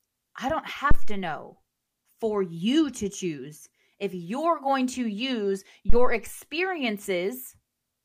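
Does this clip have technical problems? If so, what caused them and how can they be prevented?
Yes. Two phantom power thumps occur, at 0.91–1.27 s just after "I don't" and at 5.90–6.22 s just after "you're going to use", each peaking at about -6 dBFS and dying away within roughly 80 ms and 74 ms. Switching the supply on a live input sends a voltage step through the coupling capacitors. The waveform shows a large one-sided swing that settles back to zero, and the spectrogram shows a dark low-frequency smear. Mute the channel or pull the fader down before switching phantom power.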